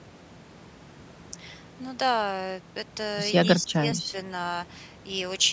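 A speech recording that has passed through call microphone processing, with nothing above 8 kHz, shows one brief level collapse from 3.59 to 3.81 s. For around a fifth of a second the speech dips by roughly 15 dB, then recovers. The likely cause is speech suppressed in double talk: with both ends talking, the echo canceller could not tell the local talker from loudspeaker echo and attenuated both.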